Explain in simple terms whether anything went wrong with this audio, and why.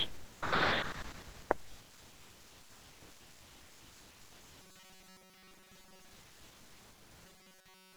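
Something went wrong twice in this speech: from 4.62 to 6.12 s, and again from 7.26 s to the very end, you get robotic sound from repeated short buffers. The voice turns into a stiff, metallic buzz stuck at about 188 Hz. That's likely because audio arrived too slowly, so the player kept repeating a tiny slice, around 5 ms, for most of those stretches, skipping the real sound underneath.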